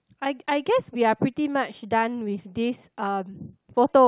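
No technical faults can be heard anywhere in the recording.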